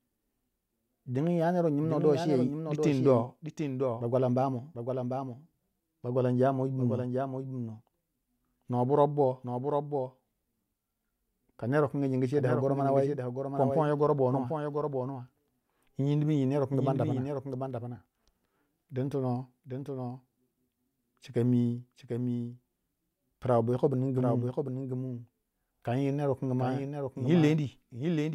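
From start to finish the speech carries a doubled audio track: a second full-band copy trails the original by roughly 0.7 s, about 5 dB quieter, with no decay or room colour. It's likely the signal was picked up twice, once through a slower path.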